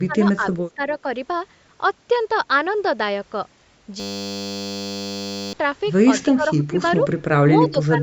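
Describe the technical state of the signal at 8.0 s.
Speech suppressed in double talk affects the signal at 8.0 s, in a span running from 7.59 s to the end of the clip. The speech dips by up to about 15 dB. The likely cause is an echo canceller meeting simultaneous talk from both ends, failing to tell this talker apart from loudspeaker echo, and attenuating both together. The audible band is capped near 8 kHz by the call's microphone processing.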